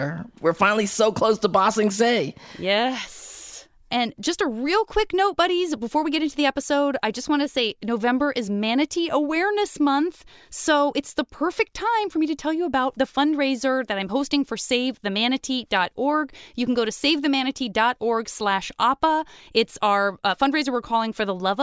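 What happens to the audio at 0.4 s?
Nothing goes wrong at 0.4 s; the speech there plays through intact, with no dropout, click or distortion.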